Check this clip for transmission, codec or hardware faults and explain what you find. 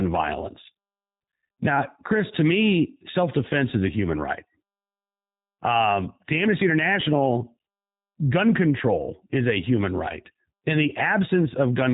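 One fault runs through the whole clip. The speech sounds slightly rough and synthetic, with nothing above 3.8 kHz. This is plainly audible G.729 codec damage: each 10 ms frame is rebuilt from a vocal tract model and a few pulses, which fits an 8 kbit/s G.729A link.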